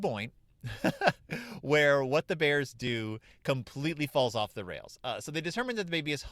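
Speech, with an overlap between stream segments at 2.87 s: two consecutive segments, apparently about 2 s long, carry overlapping time stamps, so the player trims roughly 10 ms of audio that was never actually duplicated. The waveform jumps across the gap, producing a single brief click or skip.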